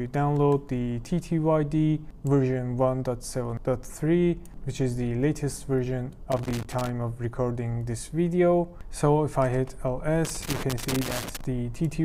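The audio has two bursts of loose connector crackle. The first runs from 6.32 to 6.90 s. The second is longer, from 10.25 to 11.44 s. Each is an irregular scratching texture laid over the sound. A worn or dirty contact in the signal chain is making and breaking as it shifts. That chops the signal on and off in rapid, uneven steps. Any DC on the line turns those breaks into pops.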